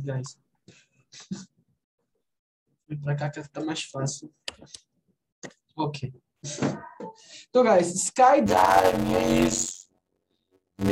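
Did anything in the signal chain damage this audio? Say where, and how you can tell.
Yes. From 8.46 s to the end at 10.92 s there's a block size mismatch (padded) at the driver or buffer stage. A steady buzz at about 92 Hz appears, and the sound drags to 0.533 times its normal speed while the timbre stays the same. One stage is handing over shorter blocks than the next one reads, which fits 256-sample writes, and the leftover part of each block gets filled with silence. Those gaps at the block rate make the buzz and stretch the timing.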